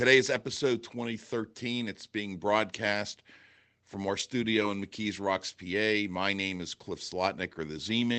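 A lost packet rebuilt from error correction occurs three times, at 3.93 to 3.95 s, at 4.19 s and at 4.61 s. Each time one packet went missing. The next packet carried a low-bitrate copy, and the decoder played that instead. So there is no gap. Each rebuilt stretch lasts about 20 ms and sounds briefly rougher and noisier. The Opus call path limits the audio to about 8 kHz throughout.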